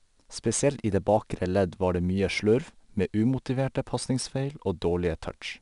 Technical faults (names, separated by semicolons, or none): 4-bit ADPCM compression